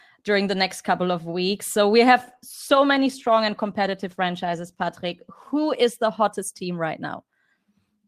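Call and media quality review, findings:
Call bitrate drop, 2.18 to 7.73 s, just after "of weeks so we". Speech turns coarse and muffled, highs cut off. Encoder forced down by falling bandwidth estimate. Fits 64 down to 15 kbps, worst for 3.2 s.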